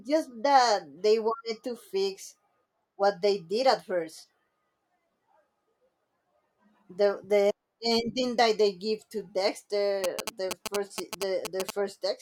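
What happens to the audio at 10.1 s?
GSM signalling bursts run from 10.04 to 11.71 s. Short groups of radio bursts from a nearby 2G phone are being rectified by the audio circuitry, producing a galloping dit-dit-dit of brief 217 Hz buzzes, only slightly quieter than the speech.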